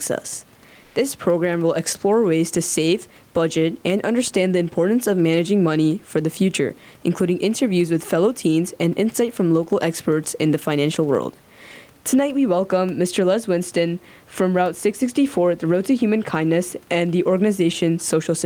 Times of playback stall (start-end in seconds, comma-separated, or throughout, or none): none